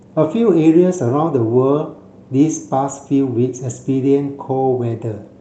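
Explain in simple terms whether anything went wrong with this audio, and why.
Nothing went wrong here: listening through this speech clip, which came over a normal call connection, nothing stood out as a problem.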